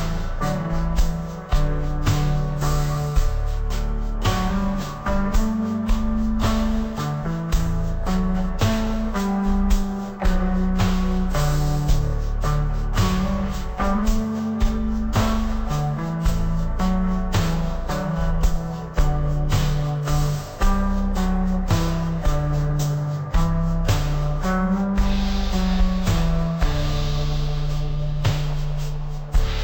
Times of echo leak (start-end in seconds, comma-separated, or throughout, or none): none